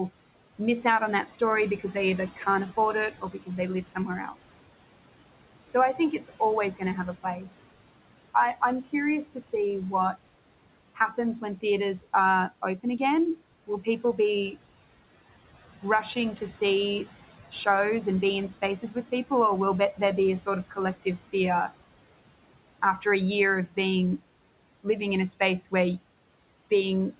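Right from the start you can hear noise suppressor artifacts. The room noise, sitting about 17 dB under the speech, gets pulled down by about 18 dB whenever the suppressor decides a band is just steady hiss. That gating happens frame by frame, so the leftover background pumps, sinking in the gaps and creeping back under the talking. The band stops around 4 kHz, which points to a 64 kbps G.711 mu-law call path.

On top of that there's speech cut by the noise suppressor, in four stretches. From 0.09 to 4.4 s, soft bits dip by up to about 11 dB, maybe a third of a second in total. From 5.68 to 14.55 s it's the worst, with drops up to about 14 dB across well under a second altogether. From 18.82 to 21.72 s it reaches about 13 dB, and from 23.01 to 23.77 s there's a short dip of about 14 dB. In each case the suppressor mistook quiet consonants and word tails for noise, so they sound swallowed.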